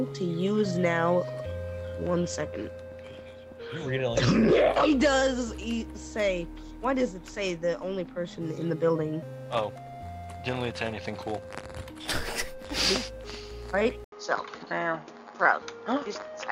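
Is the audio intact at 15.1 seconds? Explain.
No. From 14.04 s to the end at 16.52 s, input switched to a poorer device: after an 80 ms gap, the sound turns dull and narrow, with nothing above 6.9 kHz, a few decibels' level shift and a faint new noise floor, likely from a different microphone taking over.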